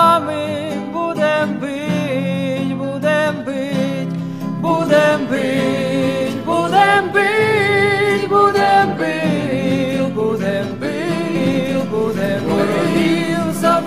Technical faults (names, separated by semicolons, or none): doubled audio track